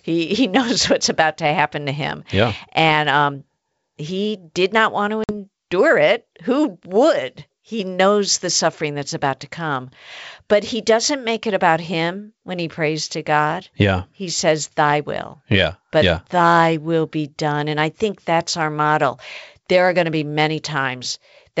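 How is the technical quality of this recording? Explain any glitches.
The recording has one glitch: packet loss on an ADPCM call, heard at 5.24 to 5.31 s in this wideband G.722 speech. Roughly 50 ms of data went missing, which points to about five lost packets, and the gap was filled with silence. Because ADPCM codes each sample as a change from a prediction, the receiving decoder's predictor and step size lost track of the sender's during that hole. The result is an abrupt, hard-edged dropout, after which the speech comes back with brief, slight distortion that fades within a few tens of milliseconds as the decoder locks back on.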